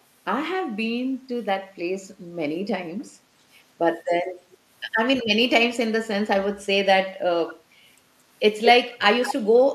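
A far-end loudspeaker's echo canceller likely let residue through, causing echo leak: delayed copies of the speech, about 240 ms late at 3.0 s, then about 220 ms late at 7.5 s and 9.23–9.33 s, growing from barely audible to clearly present.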